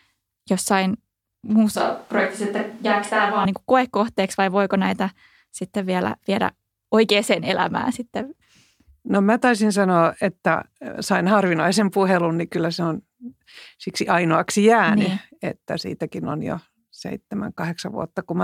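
From 1.76 to 3.45 s the close microphone's signal likely drops out, forcing a switch to a distant microphone. The speech turns abruptly roomy, hollow and thin in the bass, with faint room noise roughly 35 dB down and no real level drop, then snaps back before "niin kuin koekohteeksi vai".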